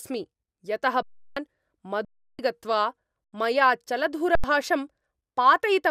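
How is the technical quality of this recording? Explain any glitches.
The recording has four underruns with held sample, where the speech briefly freezes.

They fall at 1.02 to 1.37 s and 2.05 to 2.39 s, each about 341 ms, then at 3.24 to 3.33 s and 4.35 to 4.44 s, each about 85 ms. Those lengths fit buffers of 16384 and 4096 samples at 48 kHz. The output ran dry and the converter held its last value, so the sound stops almost silently on a flat level rather than cutting to true silence with an onset click. Live audio was lost during each stall, around 300 ms in the long gaps and around 100 ms in the short ones, so the speech resumes further on.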